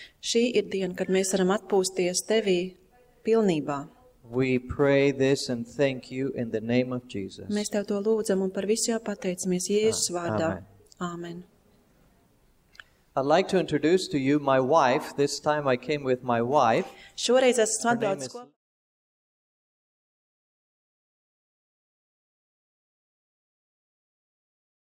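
No technical faults can be heard in the signal, and the smooth fade-out near the end, starting at around 17.5 s and reaching silence by 18.57 s, is an ordinary editorial fade.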